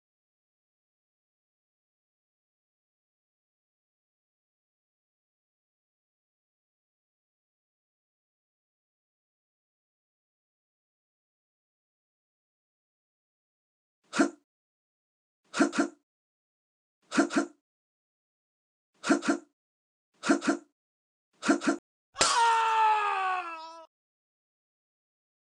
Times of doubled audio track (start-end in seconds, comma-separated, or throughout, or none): 15.73-21.79